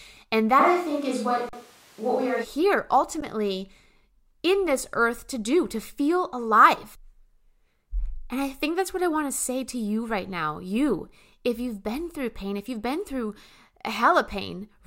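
At 0.61 s the speech suddenly goes roomy and hollow, losing its low end, and it stays that way until 2.43 s, when the close, full sound snaps back. The loudness hardly changes, but a wash of room noise rises to roughly 30 dB below the speech. That abrupt change in tone points to a likely switch to a distant microphone: the close mic's feed dropped out and something farther away, like a camera mic, covered the gap.

Inside that stretch, at 1.49 to 1.53 s, there's an underrun with held sample. The output buffer ran dry for 40 ms, and the converter held its last value, so the waveform goes flat. You hear a brief hole with barely any click going in. It happens again at 3.21 s, this time for about 14 ms. In both cases nothing was skipped, since playback picks up exactly where it stopped, so the sound comes back with only a soft edge instead of a sharp click.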